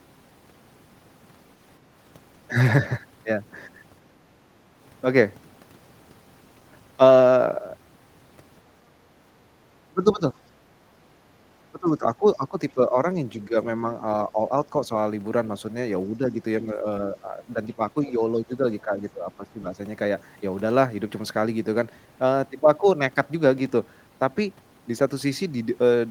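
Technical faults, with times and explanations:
9.91 to 10.34 s, 11.71 to 12.96 s, 13.35 to 13.56 s, 14.29 to 14.9 s, and 16.09 to 19.79 s: speech suppressed in double talk. The speech dips and breaks up in patches, falling by about 10 to 15 dB at worst, with the most affected, about 2 seconds in total, in the last span. The likely cause is an echo canceller that cannot separate the talker from the far side's loudspeaker echo, so it turns both down.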